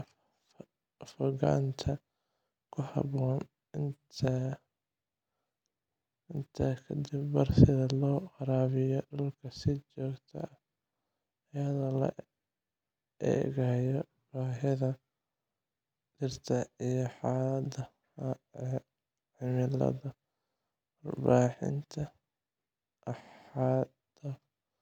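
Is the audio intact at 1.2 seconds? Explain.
Yes, the speech at 1.2 seconds plays through intact, with no dropout, click, distortion or other fault at that moment.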